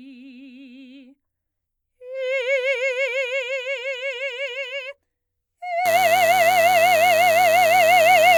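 From 5.85 s to the end of the music, a DECT cordless phone buzz cuts in. A nearby handset or base station transmits a brief radio burst every 10 ms, and the audio circuitry rectifies it into a thin, rasping 100 Hz buzz rich in harmonics, sitting about 10 dB below the music. Mains hum would sit at 50 or 60 Hz with a smoother, rounder tone. This is edgier and pulse-like, and it starts abruptly rather than being present throughout.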